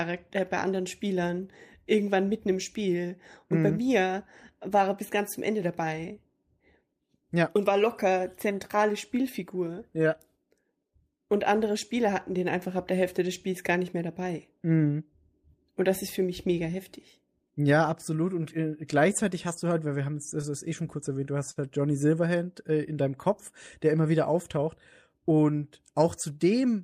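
Right after "kurz erwähnt du hast", at about 21.51 s, there's a short stall from a late packet that runs to roughly 21.59 s. A packet didn't arrive in time, the jitter buffer ran dry, and the receiver stretched the last bit of sound by about 48 ms to cover the gap. Nothing's actually lost. Playback picks up where it left off, just 48 ms later, so you hear a sound hang on a touch too long with a faint buzz or dip.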